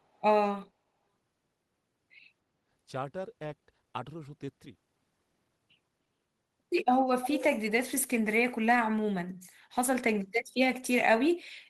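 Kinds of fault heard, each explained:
Echo leak: from 7.22 to 7.43 s a copy of the speech returns 298 ms late, about 10 dB down, likely residue a loudspeaker-side echo canceller failed to remove. Unlike room reverb, it is a discrete delayed repeat, not a smooth decaying tail.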